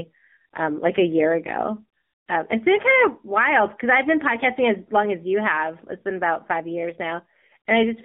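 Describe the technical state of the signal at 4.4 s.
At 4.4 s the speech is passing through the AMR narrowband mobile codec, which runs through the whole clip. The band is squeezed to roughly 200 Hz to 3.7 kHz. Nothing above 4 kHz survives, so the sound is dull and phone-like. The codec rebuilds the voice from a vocal-tract model fed by sparse pulses. The damage is plainly audible here: a buzzy, synthetic edge that fits a low mode around 7.4 kbps.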